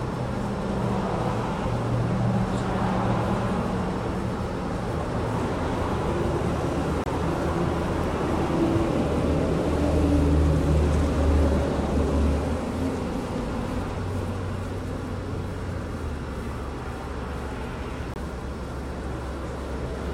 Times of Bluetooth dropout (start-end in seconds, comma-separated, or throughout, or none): 7.04-7.07, 18.14-18.18